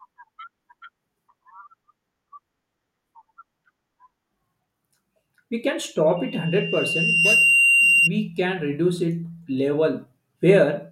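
At 6.16 s a loudspeaker feedback squeal starts: the mic catches its own speaker, and a 2.8 kHz tone swells over about a second, peaking around 5 dB above the speech before stopping at 8.11 s.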